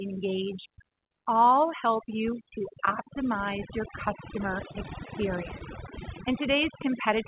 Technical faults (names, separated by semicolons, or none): overdone noise removal; short concealed packet loss